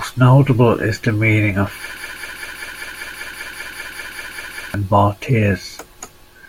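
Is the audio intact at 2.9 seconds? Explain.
No. A broken-record loop runs from 1.97 to 4.74 s, right after "is the meaning of": a 196 ms fragment repeats back to back 14 times, likely from a stalled player or stream resending its last buffer, so the audio meant for that span is lost.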